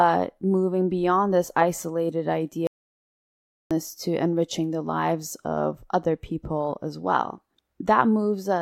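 At 2.67 s the speech cuts off abruptly and the track falls to silence, with no room tone or background hiss left, until the sound resumes mid-flow at 3.71 s. Whatever was spoken in those 1.04 s is simply missing. This is an audio dropout to silence, likely caused by the input being lost briefly, through a disconnected device, a failed link or a stray mute, while the recorder kept writing silence.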